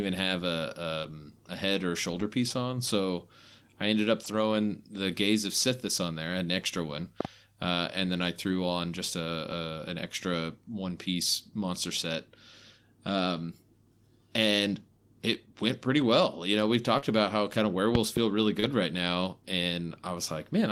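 At 1.01 to 1.12 s, just before "um a head or", a short concealed packet loss occurred. About 20 ms of speech never reached the decoder in time, so the receiver extended the preceding sound for roughly 13 ms and then blended back into the real audio. The result is a brief smear, and the passage runs slightly long. Within that stretch, at 1.03 to 1.05 s, a lost packet was rebuilt from error correction: the decoder played a low-bitrate copy carried in the following packet, so there is no gap, but the 20 ms frame sounds rougher and noisier.

The same repair recurs at 2.12 to 2.26 s, where four packets (80 ms) are rebuilt, and at 4.24 to 4.34 s, where three packets (60 ms) are rebuilt. Each stretch has a grainy, rougher texture.

At 7.21 to 7.27 s, a loud pop appears, likely from a sudden voltage spike such as a plug, switch or static discharge. It is heard as two sharp pops around 15 dB above the speech, which continues underneath.

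Between "threw on just a" and "an extra one piece", at 9.50 to 9.52 s, a single 20 ms packet is rebuilt, leaving a brief rough patch.

At 16.98 to 17.04 s, another short concealed packet loss fills about 40 ms by continuing the previous sound, heard as a brief wobble. The final 20 ms of that stretch, 17.02 to 17.04 s, is an error-corrected copy.

After "about how kind of", at 17.95 to 18.19 s, a second loud pop produces two more sharp pops around 15 dB above the speech.

At 18.60 to 18.64 s, a 20 ms concealed loss causes a short smear. Its last 20 ms, 18.62 to 18.64 s, is rebuilt from error correction and sounds rougher.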